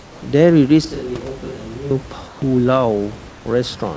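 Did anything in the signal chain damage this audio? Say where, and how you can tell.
Yes. In call processing, discontinuous transmission likely halted sending during pauses, leaving the receiver to insert comfort noise in place of the background. At 0.00–0.22 s, 2.28–2.42 s and 3.30–3.46 s, the room's textured hiss turns flat and featureless, about 3 to 4 dB quieter.

At the capture stage, a switch to a distant microphone likely followed the close microphone's signal dropping out. From 0.85 to 1.91 s, the speech abruptly turns hollow and roomy, thinner in the bass and roughly 10 dB quieter, then snaps back just as suddenly.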